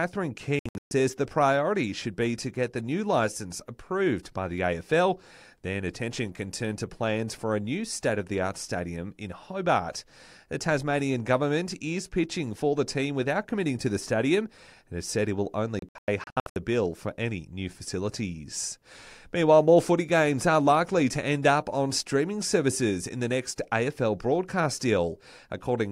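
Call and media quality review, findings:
Digital broadcast dropout, 0.59–0.92 s: speech muted in short holes just before "the priority should be". About 256 ms missing across 320 ms, longest gap 128 ms. Receiver muting on frames failing checksum. Fits roughly eight 32 ms frames lost.

Digital broadcast dropout, 15.79–16.56 s: between "has said it will" and "bill for any new", scattered muting. About 416 ms lost over 768 ms, longest hole 96 ms. Receiver discards corrupt frames until clean ones resume. Audio sent during the gaps is gone.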